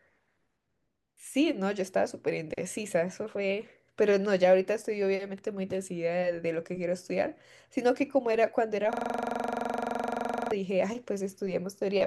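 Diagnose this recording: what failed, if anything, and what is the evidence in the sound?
Driver or buffer stage: a system hang loop from 8.93 to 10.52 s. With the driver frozen, the hardware replayed one 42.67 ms buffer, which fits 2048 samples. The result is a 23.4 Hz machine-gun stutter, and the spectrogram shows identical repeating stripes.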